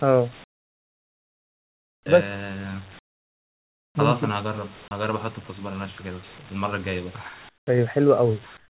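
From the start and throughout, there is echo with no canceller. Each phrase is trailed about a fifth of a second later by a thin copy about 26 dB down. On a spectrogram, every syllable has a faint ghost offset to the right, all within the band that stops at 4 kHz.

The pauses at 0.44–2.06 s, 2.99–3.95 s, 7.49–7.67 s and 8.57 s to the end are comfort noise in place of the background. The real room noise drops away and is replaced by a smooth, featureless hiss, which is likely synthetic fill generated while the sender stopped transmitting. The fill is about 29, 27, 19 and 15 dB quieter respectively. On the waveform, these gaps appear as flat, even bands, and the spectrogram shows a uniform wash without the grain of real background noise.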